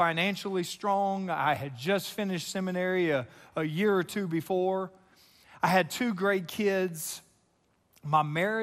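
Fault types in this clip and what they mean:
MP2 compression: throughout the speech the top end sounds dull and the sound carries a gurgling, grainy roughness, with upper frequencies flickering in and out rather than holding steady. This is likely MPEG Layer II coding run short of bits. The encoder splits the spectrum into 32 sub-bands, switches off the highest ones when the bit budget runs out and quantises the remaining bands coarsely. The damage is plainly audible, which fits a rate of about 80 kbps.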